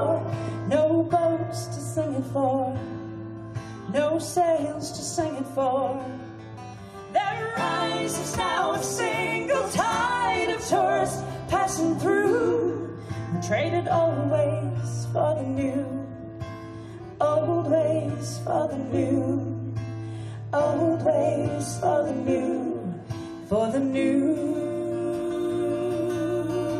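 The one problem in this audio is a repeated frames stutter from 12.41 to 12.44 s. A short chunk of about 23.2 ms gets played twice in a row, which sounds like a quick hiccup before things carry on. That block length fits a single compressed frame being written or delivered twice, so the decoder simply runs it again. The doubled chunk adds 23.2 ms to the running time, and everything after that point lands slightly late.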